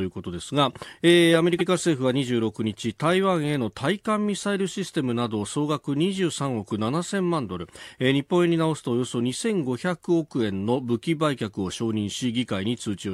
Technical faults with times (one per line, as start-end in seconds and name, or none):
1.58-1.66 repeated frames